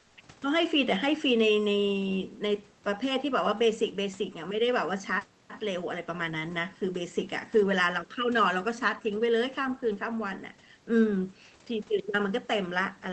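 Speech recording with comfort noise in place of the background from 0.01 to 0.17 s: for 160 ms the room tone becomes a steady, featureless hiss about 2 dB quieter, likely from Opus discontinuous transmission muting the sender while the receiver synthesises filler noise.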